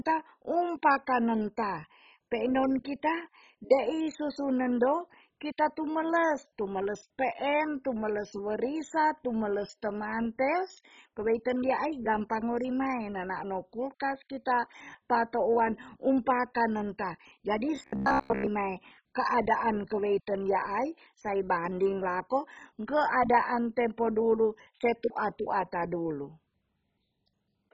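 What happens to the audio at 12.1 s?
At 12.1 s the speech sounds dull and gurgling, as it does throughout the clip. This is likely heavy MP2 compression at a very low bitrate, where too few bits switch off upper bands and the rest are coarsely quantised.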